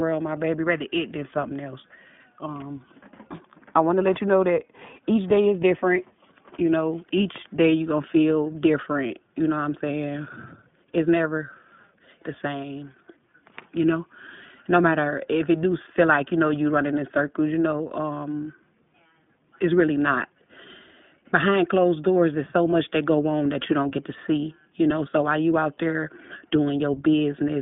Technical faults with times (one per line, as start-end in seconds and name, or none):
0.00-27.61 iLBC codec